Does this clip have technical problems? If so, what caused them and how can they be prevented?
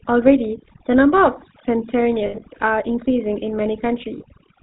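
Yes, there are three distinct problems here.

The whole clip has the character of the GSM full-rate codec: that buzzy, gravelly roughness on the speech and a hard ceiling around 4 kHz, which fits the 13 kbps full-rate GSM codec. It models the vocal tract and excites it with a sparse, regularly spaced pulse train, so the voice loses its smoothness and gets that grainy edge, and here the damage is plainly audible. To avoid it, route the call or recording through a wideband codec like AMR-WB or Opus rather than legacy GSM FR.

On top of that there's overdone noise removal running throughout. The background drops and breaks up into little twinkling specks, because the suppressor is pulling individual frequency bands down whenever they sit close to its noise estimate, taking quieter parts of the voice along with the noise. Backing off the reduction amount, or cleaning up the noise at the source, would keep the voice intact.

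Then there are lost GSM frames at two points. From 2.26 to 2.43 s the sound catches into a rough, metallic ring, with about 120 ms of gaps scattered across roughly 160 ms and the longest stretch around 70 ms. That pattern fits around six dropped 20 ms frames being patched by repeating the last good frame at falling level. A shorter one hits at 4.18 to 4.25 s, which sounds like a single lost frame. A cleaner transmission channel, or a codec with stronger error protection and better concealment, would prevent these.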